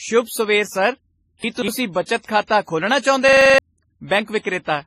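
From start to end, the speech has a hard ceiling, with nothing above 14.7 kHz. Two kinds of coding grit sit on top of each other. The likely cause is transcoding between lossy codecs. The sound points to a low-rate WMA encode, around 24 kbit/s, later re-encoded as MP3 near 43 kbit/s. The second encoder spent its bits on the first one's damage and added its own. The lowest cut-off survived.

From 1.44 to 1.68 s, just before "ਬੱਚਤ ਖਾਤਾ ਖੋਲ੍ਹਣਾ", the audio briefly jumbles. These are chunks out of order. One piece of about 60 ms arrived late and plays three chunks after its proper place. No audio is missing. The sequence is simply wrong. The displaced piece creates three hard joins around a garbled moment.

From 3.29 to 3.58 s, right after "ਬੱਚਤ ਖਾਤਾ ਖੋਲ੍ਹਣਾ", a system hang loop takes over. The machine stalled while the sound hardware kept replaying its ring buffer. A 42.7 ms slice repeats seven times, which fits a 2048-sample buffer. 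The repeats come at 23.4 Hz. That gives a rough, buzzing stutter. About 300 ms of the real audio is lost behind it.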